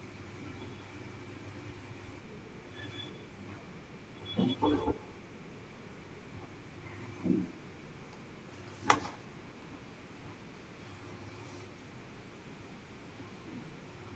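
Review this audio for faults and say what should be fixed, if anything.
Every phrase in this speech is trailed by a faint, thinner copy arriving around 150 ms later, about 18 dB below the direct speech, and it runs through the whole clip. This is echo with no canceller: the far end played the call over a loudspeaker, its microphone picked that playback up, and nothing removed it before the sound came back across the network. The round trip sets the delay, and the loudspeaker and room give the copy its thin colour. The top end stops around 8 kHz, which fits a wideband call codec. To fix it, enable acoustic echo cancellation at the far end, or have that participant use a headset instead of a loudspeaker.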